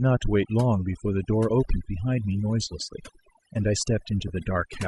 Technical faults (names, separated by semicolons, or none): overdone noise removal; Bluetooth LC3 compression; lost LE Audio frames